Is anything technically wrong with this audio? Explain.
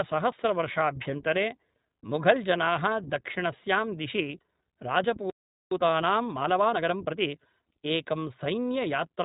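Yes, there are three problems. Throughout, the speech has the sound of the iLBC codec. Nothing above 3.8 kHz survives, and each short frame is coded on its own, so the sound is clear but slightly rough and synthetic. The coarse texture fits iLBC's 20 ms frame mode rather than a simple low-pass filter, which would sound dull but smooth.

From 5.3 to 5.71 s there is a playback stall. The sound stops dead in mid-flow for about 0.41 s and then resumes. This is most likely the player running out of buffered data. Unlike a dropout from lost packets, it is a clean silence of full length.

From 5.71 to 7.35 s there is time-compressed catch-up. The player works off its backlog by cutting out and cross-fading small pieces. The speech runs about 1.25 times faster at unchanged pitch, which distinguishes it from a simple speed-up that would raise the pitch.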